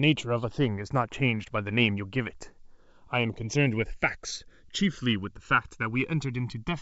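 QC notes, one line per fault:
Throughout: channels drifting apart. The two channels run on clocks differing by around 200 ppm, so their offset grows to about a millisecond. Summed to mono, comb notches sweep slowly downward, heard as slow flanging and seen as descending dark bands on a spectrogram.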